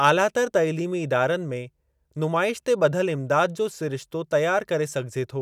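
No technical faults are audible.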